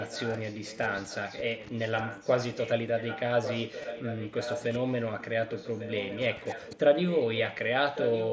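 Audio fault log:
0.00–2.70, 2.97–3.20, 3.43–5.26, 5.48–6.79, 7.08–7.69 and 7.95 to the end: echo leak. A second copy of the speech trails the original by about 1.15 s. It sits roughly 10 dB down, rising to about 5 dB down at the end. The likely cause is a loudspeaker at the far end whose echo canceller let part of the returned signal through.
3.82 and 7.58: concealed Bluetooth headset packet loss. Each is a tiny blip, 15 ms and 7.5 ms long. Lost audio between headset and phone was patched by repeating a recent stretch of waveform. So the single lost frame at 7.58 is almost hidden, while the two-frame run at 3.82 comes through as a brief buzzy tone.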